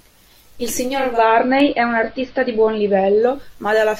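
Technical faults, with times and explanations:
0.82–3.67 s, digital radio blending to analogue: the receiver lost its digital signal and cross-faded over about 474 ms to the station's AM broadcast, then back. The level shifts by about 2 dB, and faint hiss sits roughly 40 dB below.
1.60 s, dropped samples: a single sharp click, a thin vertical line through the spectrum. It is likely caused by a fraction of a millisecond of samples going missing, so the waveform jumps straight to a later value without losing any audible sound.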